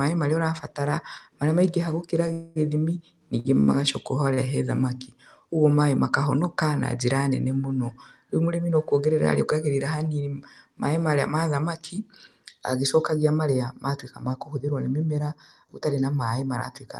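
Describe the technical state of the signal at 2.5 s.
At 2.5 s the signal is inside a call audio freeze running from 2.33 to 2.58 s. The likely cause is late packets draining the jitter buffer, so the receiver extends the last sound as a buzz or hiss that fades over about 230 ms rather than dropping to silence. When audio resumes, nothing has been lost. The stream simply continues about 230 ms later than before, heard through the call codec's band limit near 12 kHz.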